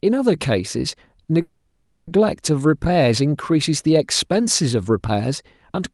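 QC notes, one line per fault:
1.41–2.09 s, call audio freeze: the speech stops and the last sound is stretched into a fading buzzy hiss for about 0.66 s, likely because packets stalled and the jitter buffer ran dry. Speech resumes where it left off, with nothing lost but everything after arriving about 660 ms late. On a spectrogram, the band-limited Opus path's content, topping out near 12 kHz, turns into a smeared, repeating, decaying texture. The waveform shows a tapering envelope in place of speech.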